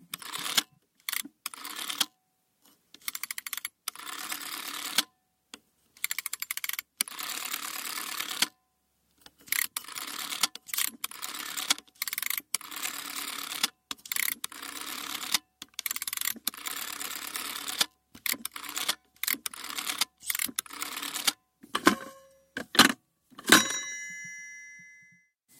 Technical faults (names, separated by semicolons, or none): none